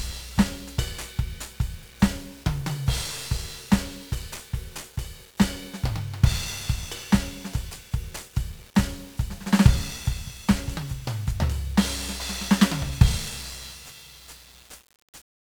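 From start to finish the music sounds fuzzy and crackly, with the treble sunk under a dense bed of hiss. This is heavy 1-bit DFPWM compression: each sample keeps only an up-or-down step, and the coarseness fits a rate around 48 kbps.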